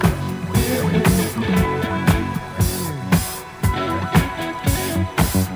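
Right through the clip there's crude rate conversion: linear interpolation with no filter, which fits a 32 to 48 kHz jump, leaving a gritty, inharmonic fizz roughly 20 dB under the sound.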